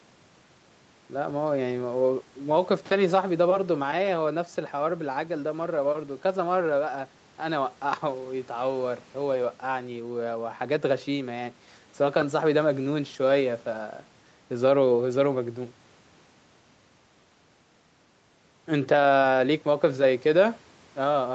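There are no technical faults to describe in this speech clip.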